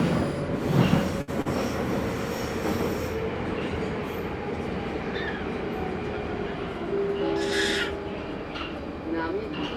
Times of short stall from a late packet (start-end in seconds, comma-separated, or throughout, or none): 1.21-1.47